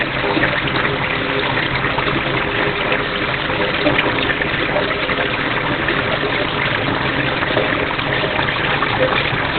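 Throughout the clip the sound is muffled and hoarse, with nothing above 4.3 kHz and heavy codec damage. This is likely Opus compression at a very low rate. The narrowband, speech-oriented SILK character points to a bitrate of around 12 kbps.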